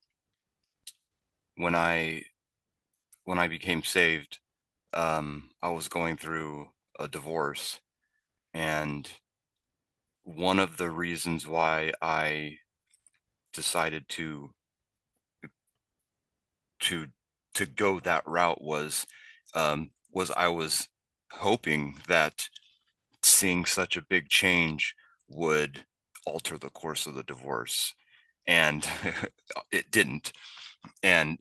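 The speech recording shows no technical faults: the signal holds steady with no interruptions, distortion or level problems at any point.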